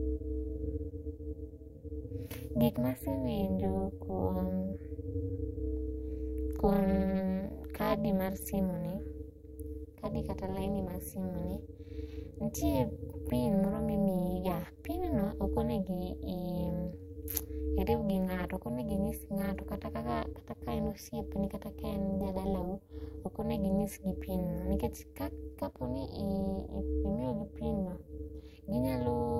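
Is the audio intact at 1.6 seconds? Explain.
No. Overlap-add ripple is present at 1.6 seconds, as it is across the entire clip. The speech was split into windowed frames and rebuilt with an overlap whose windows do not add up to a steady gain, so the level swells and dips once per frame. Here the dips reach about 60 dB deep at a rate around 400 Hz, giving a harsh, metallic buzz with extra tones around the voice rather than a clean voice.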